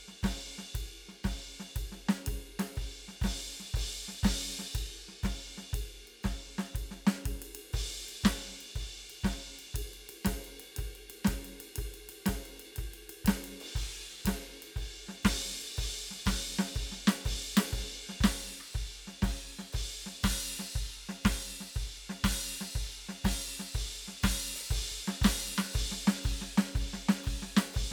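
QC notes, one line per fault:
No faults heard in this music.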